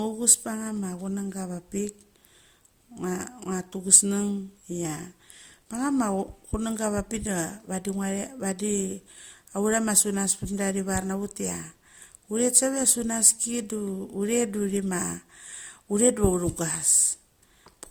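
Throughout the speech, two layers of coding artefacts sit on top of each other and are heard together, with nothing above 20 kHz. The layered character points to transcoding between lossy codecs, likely an AAC-style encode at around 64 kbit/s later re-encoded with Opus at about 48 kbit/s, with the second encoder spending bits on the first one's damage while adding its own.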